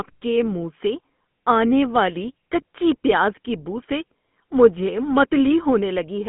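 From start to finish the speech carries GSM full-rate codec damage, plainly audible: a buzzy, gravelly roughness from the coarse pulse-train excitation, a line band of roughly 150 Hz to 3.5 kHz, and nothing above 3.8 kHz, which fits the old 13 kbps GSM coding.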